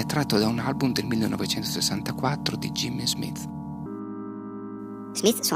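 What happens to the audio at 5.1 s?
At 5.1 s the audio has a wrong sample rate, from 3.86 s to the end. It runs 1.38 times fast and about 5.5 semitones high, which fits 32 kHz audio played at 44.1 kHz.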